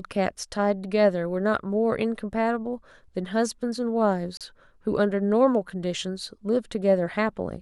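At 4.37 s the speech drops abruptly into silence for about 35 ms, then resumes at 4.41 s. This short hole is a Bluetooth stall. The likely cause is radio interference that delayed packets on the wireless link, so the headphones' buffer emptied and playback simply paused until the retransmitted audio arrived and the stream could continue.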